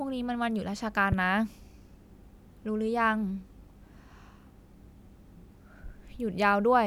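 At 1.12 to 1.15 s there's a single loud pop, a sharp thump jumping well above the speech, most likely a voltage spike from a plug, switch or static discharge.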